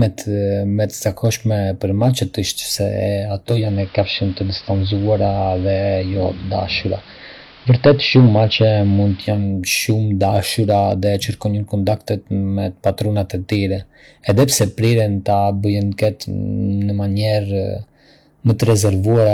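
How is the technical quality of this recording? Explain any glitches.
Two faults are audible: clipping throughout the speech, and a stretch where the sound switches to an analogue broadcast.

Hard clipping runs through the whole clip. The signal is driven about 8 dB past the available headroom, so roughly one sample in a hundred or fewer is cut flat, adding crackle on loud syllables.

Digital radio blending to analogue occurs from 3.44 to 9.53 s, just after "për macet është se". The receiver cross-fades over 0.36 s to the AM broadcast, so the level shifts by about 2 dB, and hiss sits roughly 30 dB below the speech.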